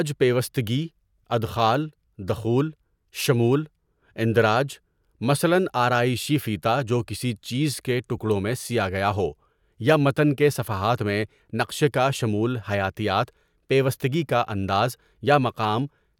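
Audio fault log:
No faults detected in this speech recording. Nothing in the audio calls for a log entry.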